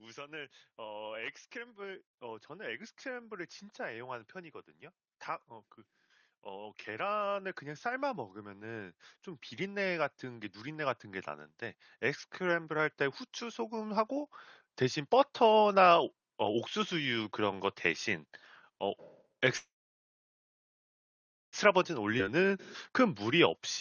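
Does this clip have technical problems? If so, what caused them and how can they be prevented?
Yes. Automatic gain rising: the automatic gain control judged the input too quiet and pushed its gain up gradually, from 0.05 to 4.66 s by about 8 dB and from 6.44 to 15.69 s by about 14 dB, so speech and background swell together. Setting a sensible input level or slowing the AGC's attack prevents this.

Call audio freeze: packets were likely held up in transit until the jitter buffer ran dry. From 19.57 to 21.56 s the audio stalls, briefly carrying the last sound on before roughly 1.85 s of near-silence, then resumes where it stopped, inserting about 1.95 s of delay. A steadier, less congested network path prevents this.

Jitter buffer speed-up: after the stall the buffer held too much audio, so from 21.95 to 23.60 s the receiver trimmed short pitch-period pieces repeatedly, about a tenth of a second in total. 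The speech runs at 105% speed with unchanged pitch, sounding slightly hurried. Reducing network jitter prevents this.

Skip ahead: during that catch-up, around 22.18 to 22.22 s, a stretch of queued audio was dropped, roughly a second and a half, and the two sides were joined almost directly with a tiny filled gap, so playback jumps forward. A larger buffer ceiling or steadier delivery prevents this.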